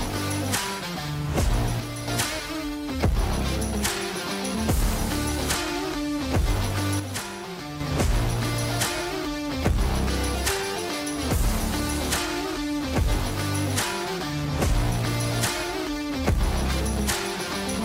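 At 1.8 s the level abruptly sags by about 6 dB and holds there until 2.08 s, then snaps back. The same thing happens again from 7.0 to 7.8 s, a longer stretch. Both dips are most likely one channel drops out: one side of the stereo pair went silent, so the mono sum lost half of everything the channels shared, and the sound was otherwise unchanged for those moments.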